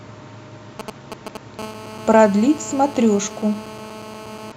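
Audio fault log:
0.80–1.59 s, GSM signalling bursts: a galloping, irregular dit-dit-dit of ticks and brief buzzes sits roughly 10 dB under the speech. A nearby 2G handset is exchanging short control transmissions with the network, and each packet of radio bursts is picked up and rectified by the audio circuitry. Inside each group the bursts repeat at about 217 Hz, so the ticks carry a short buzz at that rate.
1.59–4.52 s, GSM phone buzz: the interference becomes a continuous, harsh, raspy buzz at 217 Hz, rich in harmonics and about 18 dB below the speech, holding steady to near the end of the clip. The handset is now transmitting steadily, as it does on a call, pulsing its RF output 217 times per second. The audio circuitry demodulates that pulse train into a buzz unrelated to the speech above it.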